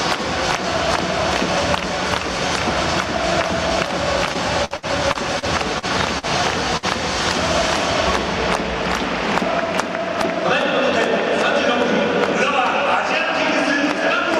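From 4.33 to 6.26 s the audio breaks up with repeated packet loss, giving a choppy, robotic quality. Seven separate dropouts fall in this stretch, the longest 62 ms. Each is patched by extending the preceding sound, about 275 ms of filler in total, while roughly 120 ms of real audio is simply gone. On a spectrogram the stretch shows smeared, frozen harmonic bands repeating at short intervals. The waveform shows abrupt joins where fresh audio resumes.

At 6.77 to 6.86 s a single burst of packet loss cuts a hole of about 60 ms. The receiver fills 57 ms by carrying on the last sound and fading it down, so that moment becomes a brief held tone or fading hiss before the audio jumps ahead with material missing. In the waveform this appears as a tapering envelope ending in a hard discontinuity. On a spectrogram it shows as horizontally stretched, darkening bands with no new detail.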